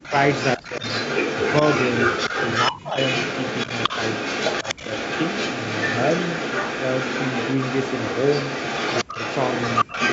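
A speech recording from a call whose far end is likely on a loudspeaker with an echo canceller that failed to cancel its own pickup. From 0.03 s to the end, the echo leak is audible as a second copy of the voice trailing about 283 ms behind, and only a little quieter than the speech itself. That makes the talker sound doubled. The same canceller likely could not tell the near talker from the loudspeaker echo when both sides were active, so the speech is suppressed in double talk. Brief gaps and dips appear at 0.0 to 0.14 s, 0.57 to 0.84 s, 2.69 to 2.97 s, 4.63 to 4.89 s, 9.04 to 9.18 s and 9.84 to 9.94 s. The drops at 0.0, 2.69 and 9.04 s are deep, close to silence, with around 30 dB at 9.84 s and around 20 dB at 0.57 s. At 4.63 s the voice only dips slightly. The audio carries nothing above 8 kHz, which fits the normal band limit of the call path.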